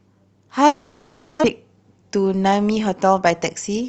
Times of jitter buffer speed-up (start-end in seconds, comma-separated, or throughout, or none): 1.53-2.49